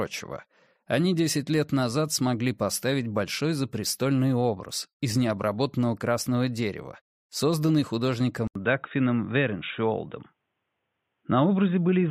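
At 8.47 s the sound drops out for about 80 ms, then returns dull and boxy with nothing above 3.8 kHz, a faint new background hiss, and the level about the same. The input likely switched to a poorer device; the gap and changed noise floor set this apart from a mere bandwidth drop.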